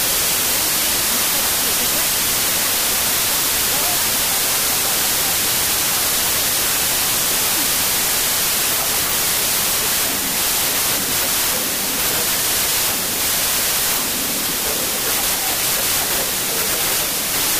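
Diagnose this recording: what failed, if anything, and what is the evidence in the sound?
Loud, hissy noise covers the whole clip, with the original sound buried inside it, running about 1.33 times too fast and high in pitch. This is a wrong sample width fault at the sample-format conversion stage. Packed 24-bit data were read as 32-bit samples, so most values mix bytes from neighbouring samples.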